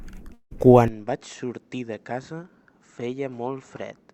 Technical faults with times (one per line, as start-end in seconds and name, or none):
0.33-0.53 long network dropout
0.88-4.13 input switched to a poorer device